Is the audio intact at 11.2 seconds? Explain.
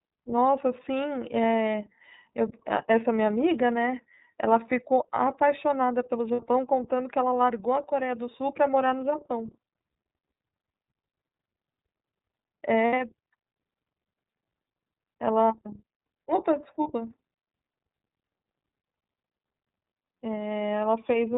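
No. At 11.2 seconds the speech is still inside the iLBC codec damage that runs through the whole clip. Each 30 ms frame is coded on its own, with nothing passing above 4 kHz. The sound is muffled and a little rough and synthetic, plainly audible damage that fits the codec's 13.33 kbps mode.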